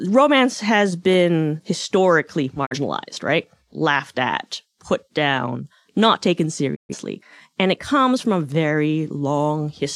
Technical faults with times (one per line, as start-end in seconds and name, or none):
2.65-2.76 digital broadcast dropout
6.74-6.95 digital broadcast dropout